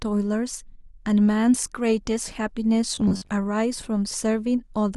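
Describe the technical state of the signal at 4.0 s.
At 4.0 s the speech signal is intact, with no audible technical fault at that moment.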